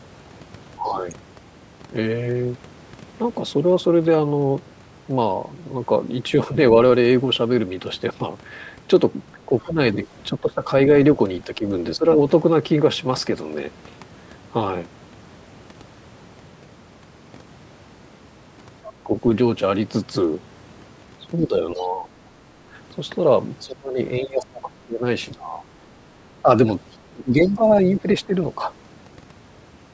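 At 0.77 to 0.98 s the speech dips by about 10 dB. Between 9.35 and 12.06 s it drops again, by up to about 15 dB, in pieces adding up to under a second. From 9.6 to 10.07 s a faint second voice sits about 25 dB under the speech. This is speech suppressed in double talk, likely caused by the echo canceller being unable to separate the talker from the loudspeaker and so turning both down. The faint voice is the other side's voice leaking through, likely the far end's playback that the canceller did not fully remove from the microphone.

A short scrap of that other voice, about 20 dB down, appears at 18.85 to 18.93 s. The speech is then cut by about 20 dB at 18.89 to 19.14 s. From 21.41 to 28.6 s the suppression returns in bursts, reaching about 20 dB and totalling roughly three seconds. Within that stretch, the leaking voice comes through briefly at 21.8 s, about 30 dB down, and again from 26.92 to 27.82 s, about 25 dB down.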